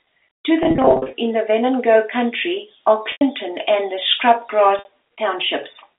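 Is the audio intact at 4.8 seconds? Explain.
No. Between 4.79 and 4.85 s there is packet loss with pitch repetition: about 60 ms of audio is missing, consistent with roughly six 10 ms packets. The receiver fills the gap by repeating the last pitch period and fading it over about 50 ms, so the sound briefly holds as a buzzy, frozen tone, dips toward silence, then cross-fades back into the band-limited telephone signal.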